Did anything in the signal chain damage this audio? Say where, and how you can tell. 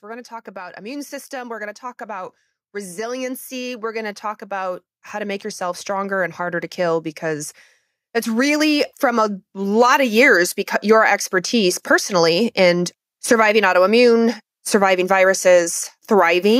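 Yes. The call-processing stage shows automatic gain rising twice. From 0.05 to 7.53 s the level climbs by about 14 dB, and from 8.23 to 10.22 s, ending just before "because your expertise personally", it rises by about another 4 dB. The gain control judged the input too quiet and turned itself up gradually. Because the speech and the background noise swell together over seconds, this is gain being applied, not a talker moving closer to the microphone.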